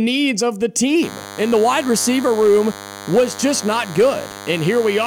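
From 1.02 s to the end of the speech, a DECT cordless phone buzz sits under the voice: a nearby handset or base station's radio bursts every 10 ms are rectified by the audio circuit, giving a thin, steady 100 Hz buzz, roughly 15 dB below the speech. A spectrogram shows evenly spaced horizontal harmonic lines at multiples of 100 Hz.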